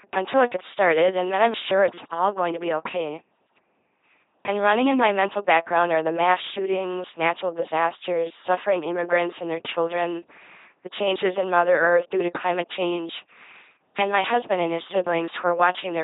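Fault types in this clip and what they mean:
LPC-10 vocoder: the speech is rebuilt through a vocal tract filter of up to ten poles, driven only by a pulse buzz or noise. It sounds heavily robotic, fitting a 2.4 kbit/s coder. Spectrograms show rigid harmonics or flat noise, with nothing above 3.8 kHz.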